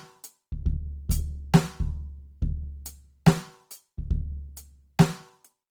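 A music clip with plainly audible Opus compression damage throughout, likely from a low-rate encode in the codec's music mode. Tones sound grainy and rough rather than swirly, which fits about 24 kbps. A spectrogram would show bands filled with noisy texture and nothing above 20.4 kHz.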